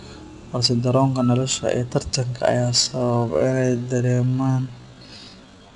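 A speech recording with 4-bit ADPCM compression throughout: a gritty hiss rides on every loud syllable and attacks sound rough, at a rate near 89 kbps. Unlike a perceptual codec, there's no swirly warble, just noise tracking the level. From 2.76 s to the end, a time-stretched section plays at roughly 0.55 times speed, dragging, likely from software repeating short pieces. Pitch stays put, which separates it from slowed playback, where the voice would drop.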